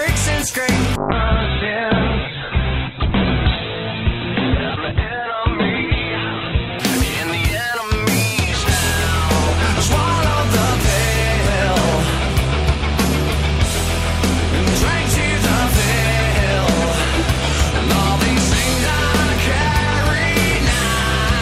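From 0.96 s to 6.87 s there is a call bitrate drop. The bandwidth estimate collapsed and the encoder was starved of bits, which fits a fall from about 96 to 8 kbps. Bandwidth shrinks from 20 kHz to 4 kHz, leaving coarse, muffled, watery sound.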